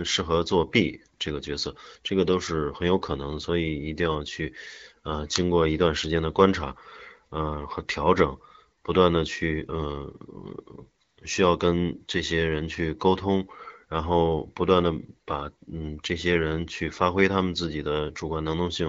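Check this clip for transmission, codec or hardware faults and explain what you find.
The speech shows AMR comfort noise in three places: brief dropouts at 1.18 s and 8.82 s, each about 20 ms, and a longer one from 11.03 to 11.17 s, about 140 ms. In each the sending phone judged the talker silent and stopped sending speech frames, and the receiver filled the gap with noise synthesised from a coarse level and spectrum estimate. The real background gives way to a smooth, steady hiss that switches in and out. On a spectrogram these spans show flat, featureless noise with sharp edges against the surrounding speech texture. The waveform shows a low, uniform envelope. Around them the wideband AMR-WB coding sounds clear, with only light coloration, which fits a rate around 12.65 kbit/s.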